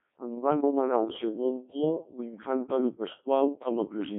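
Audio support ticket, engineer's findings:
Codec 2 vocoder damage, throughout the speech. Robotic, buzzy voice with heavy artefacts. Band-limited to roughly 150 Hz to 3.5 kHz, nothing above 3.7 kHz. Probable component: digital-radio vocoder link, consistent with a 1.6 kbit/s mode. Decoder resynthesises the voice from sinusoids using only pitch, voicing, energy and envelope. Differs from plain band-limiting or a waveform codec's warble: the original waveform is gone, so the voice has a synthetic, sine-built buzz.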